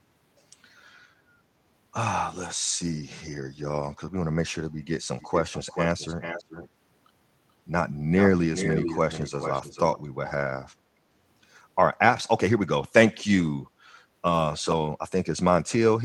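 From 5.2 to 6.69 s, then briefly at 8.18–8.27 s and again from 8.54 to 9.99 s, a delayed copy of the speech trails it by 433 ms. This is an echo leak, likely from a far-end loudspeaker whose echo canceller let its own microphone's pickup return down the line. The first copy sits roughly 10 dB under the talker, the later ones closer to 5 dB. The fixed, distinct lag sets it apart from room reverberation, which smears continuously instead.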